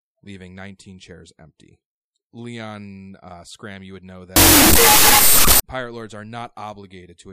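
After "you would know", from 4.36 to 5.60 s, a wrong sample width turns the speech into loud noise at half speed and lower pitch, which fits 32-bit float samples read as 16-bit integers. Unlike a plain sample-rate error, most of the signal is buried in hiss until "pirate lords are not".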